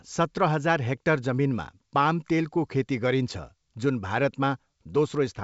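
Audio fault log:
The speech arrives through G.722 wideband telephone coding at 64 kbit/s, with content reaching up to about 7.7 kHz and nothing above, and any coding damage is at most faint.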